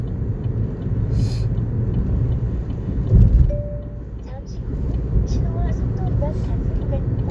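Listening to this recording of sounds, nothing stood out as a technical problem.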